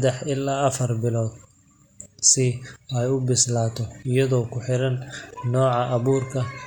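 No technical faults can be heard anywhere in this speech recording. The signal stays continuous and steady in character from beginning to end.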